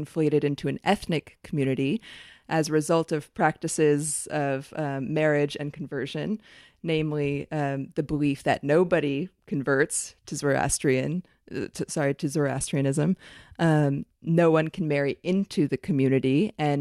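No technical faults can be heard anywhere in the signal.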